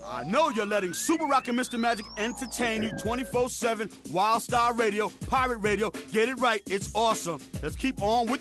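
Nothing goes wrong anywhere along the way here, and the sound comes through the call path with just the ordinary character of a compressed, slightly band-limited call.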